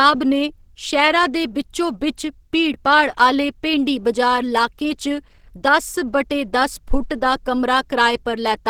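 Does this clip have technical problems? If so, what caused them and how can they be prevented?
Yes. Opus compression damage runs throughout the speech, sounding hoarse, rough and grainy, likely from the hybrid speech mode at a starved rate around 16 kbps. Encoding at a higher bitrate prevents this.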